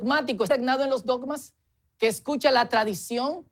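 A skip ahead at about 0.49 s drops roughly 0.7 s of queued speech, so playback jumps forward and the two sides join almost directly. A jitter buffer speed-up from 1.10 to 1.76 s trims repeated pitch-period slices, about 50 ms in total, so speech runs at 108% at unchanged pitch and sounds hurried.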